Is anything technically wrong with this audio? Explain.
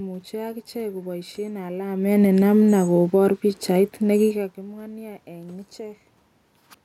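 Yes. From 1.8 to 4.53 s there's automatic gain falling: the AGC found the input too hot, or its background noise too strong, and eased its gain down by about 6 dB, so the speech and the room noise sink together. The level shifts around 2 and 4 seconds are just the talker moving relative to the mic.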